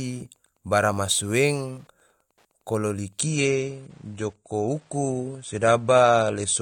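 Wi-Fi interference runs through the whole speech clip as a faint, steady ticking about ten times a second, well below the speech. A nearby radio's beacon, repeating every 102.4 ms, is being picked up and rectified by the audio circuitry, leaving a regular pulse.

At 3.21 s the adaptive stream switches to a lower bitrate and stays there to the end. Treble abruptly stops above 9.7 kHz and the speech takes on a thinner, more smeared codec texture with no gap, which fits a step down from roughly 96 to 32 kbit/s AAC.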